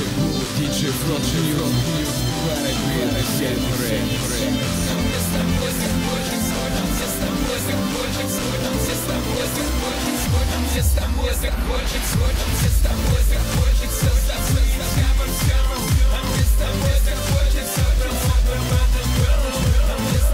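Throughout, a doubled audio track trails everything by about half a second at roughly equal level, likely a second capture path; the waveform shows every onset repeated.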